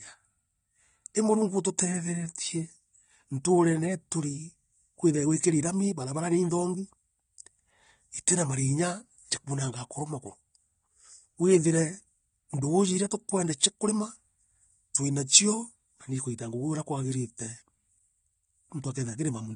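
From start to finish, the speech has likely been through AAC compression at a low rate, consistent with AAC-LC near 32 kbps. The encoder quantises its frequency lines coarsely and discards the top band, so nothing remains above 9.7 kHz, leaving the sound dull, smeared and audibly warbling or fizzy.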